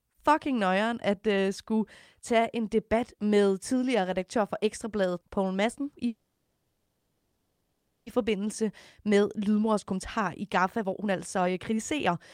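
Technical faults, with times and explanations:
6.07 to 8.08 s, call audio freeze: Packets were most likely held up in transit, letting the jitter buffer run dry, so the receiver stretched the last received sound to cover a wait of about 2 s. That fill is heard as a fading buzzy continuation that ends in roughly a third of a second of silence before the audio resumes from where it stopped. Nothing is lost, but a 2 s gap has been inserted and the call's delay grows by the same amount.
8.28 to 12.1 s, jitter buffer speed-up: With the late audio now arriving in a bunch, the jitter buffer holds more than its target, so the receiver trims it back by cutting out short pitch-period slices over and over, around 0.7 s in total. The speech plays at about 115% speed while keeping its pitch, so it sounds hurried.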